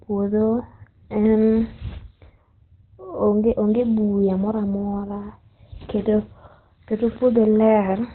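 The whole speech track sounds muffled and hoarse, with nothing above 4.2 kHz, which is likely Opus compression dropping into its narrowband speech mode at a low rate, around 12 kbps. After "onge buya mora mora", from 5.81 to 6.47 s, voice and background jump up together by about 8 dB, a sudden gain jump, likely from an unramped digital gain change.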